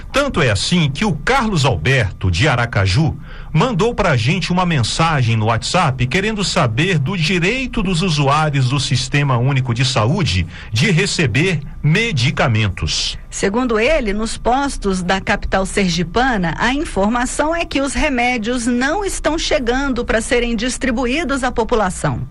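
A block of digital silence at 7.07 s: about 2 ms of samples drop to zero with no fade, so the abrupt edges register as a single tick.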